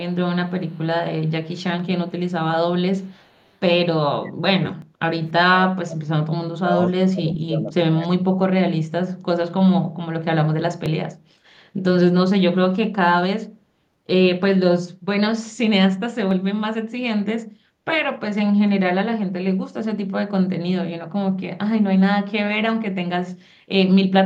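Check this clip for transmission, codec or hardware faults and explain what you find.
Three kinds of fault are audible: a faint echo in the opening seconds, the speech being pushed down in several stretches, and three brief points where the audio jumps ahead.

Echo leak, 0.48–0.79 s, 1.26–1.63 s, 2.07–2.32 s and 2.98–3.57 s: a very faint delayed copy trails the speech by 300 ms, around 40 dB down. The likely cause is a far-end loudspeaker whose echo canceller let some of its microphone pickup return.

Speech suppressed in double talk, 3.96–6.05 s, 6.56–6.78 s and 7.09–8.39 s: the speech dips sharply, by as much as roughly 40 dB, in uneven pieces. This is likely an echo canceller that, with both sides talking, could not tell this talker from echo and attenuated everything.

Dropped buffer (overrun) at 4.82 s, 10.86 s and 16.31 s: each is a small skip with no gap, roughly 10 ms missing. That points to a capture buffer of about that length being overwritten before it was read, likely through the program falling behind.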